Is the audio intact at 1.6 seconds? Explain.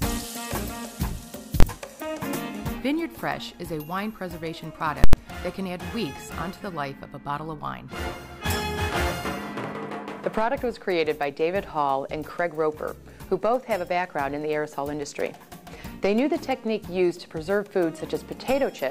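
No, from 1.60 to 1.63 s invalid numbers at full scale pin a roughly 23 ms block, which fits a 1024-sample block, to maximum value, heard as one sharp bang.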